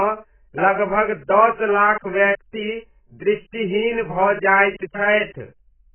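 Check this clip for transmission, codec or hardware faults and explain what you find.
There's one problem here, and it runs through the whole speech clip: heavy AAC compression damage. Nothing comes through above 3.1 kHz, so everything sounds dull and boxed in, with a smeared, warbly texture on held sounds and fizzy sibilants. The cause is likely an AAC-LC encode at a very low rate, something around 9 kbps. At that rate the encoder drops the top end and coarsely quantises what's left, leaving gaps it can't cover cleanly.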